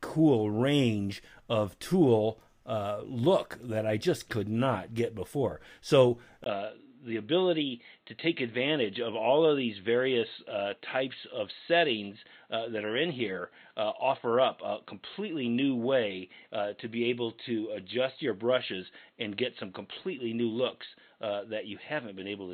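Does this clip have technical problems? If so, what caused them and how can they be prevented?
Yes. Input switched to a poorer device at 6.44 s and lasting to the end: after a 20 ms gap the sound turns dull, with nothing above 4.2 kHz and a faint new background noise at an unchanged level. The likely cause is the system changing to another microphone or a headset's call profile, whose narrower band and own noise replace the original input. Locking the input device in the system settings and disabling automatic switching to headset call profiles prevents it.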